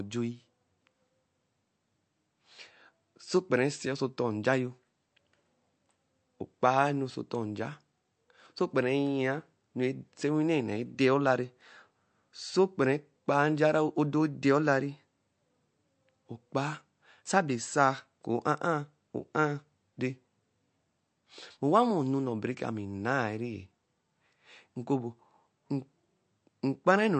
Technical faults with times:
0.00-27.20 MP3 compression

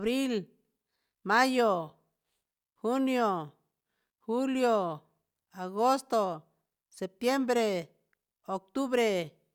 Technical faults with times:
none

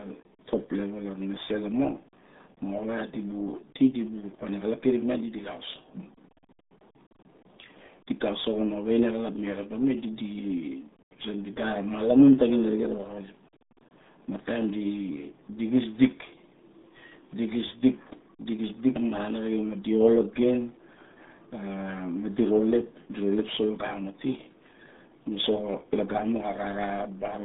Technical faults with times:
0.00-27.44 RealAudio 14.4 codec

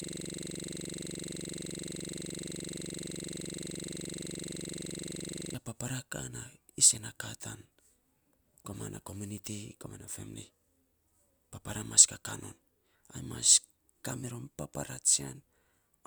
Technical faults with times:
0.00-5.54 system hang loop

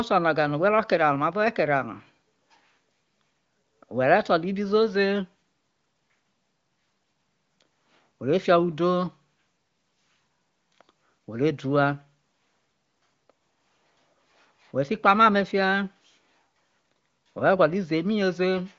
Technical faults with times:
none

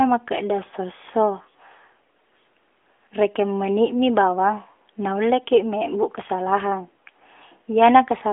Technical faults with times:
none

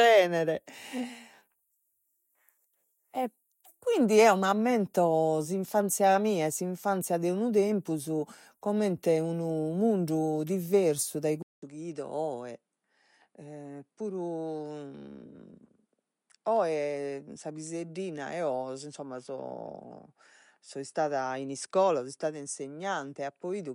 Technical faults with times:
11.42-23.74 input switched to a poorer device

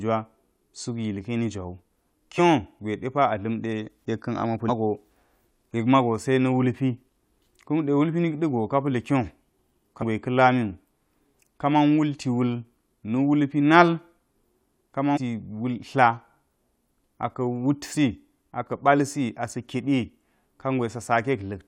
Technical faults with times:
2.38-2.40 damaged data in a compressed stream
4.68-4.70 damaged data in a compressed stream
10.01-10.03 damaged data in a compressed stream
15.15-15.18 damaged data in a compressed stream
17.95-17.97 damaged data in a compressed stream

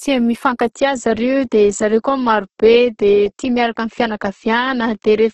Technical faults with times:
0.00-5.34 Opus compression

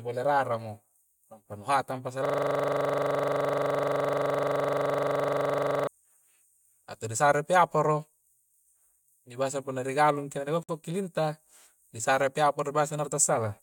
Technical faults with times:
2.25-5.87 system hang loop
10.63-10.69 gap at a join of encoded pieces

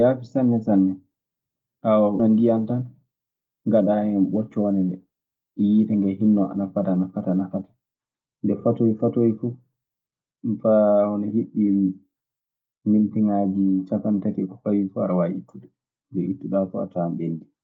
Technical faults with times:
2.19-2.30 skip ahead

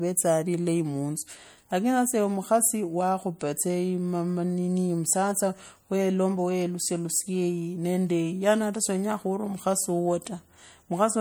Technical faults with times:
0.00-11.21 MP3 compression

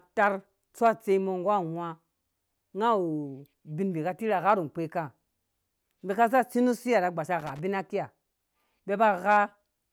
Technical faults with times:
7.40-7.61 loose connector crackle

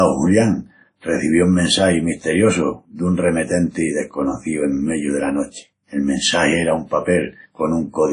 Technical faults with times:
0.00-8.13 WMA compression

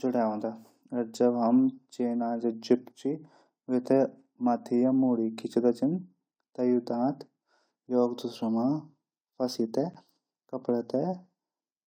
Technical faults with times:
9.94 block of digital silence

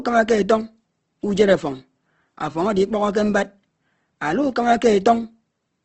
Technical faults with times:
0.00-5.84 Opus compression

